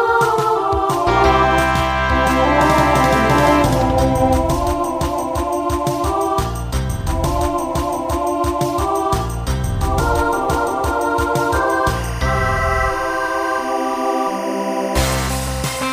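From 11.93 s to the end at 15.93 s, timecode bleed sets in. Linear timecode from a neighbouring track or cable leaks in as a chirping warble roughly 15 dB under the sound. Unlike a steady whine, it flips between pitches near 1 and 2 kHz in a rigid rhythm that fits 23.976 fps code.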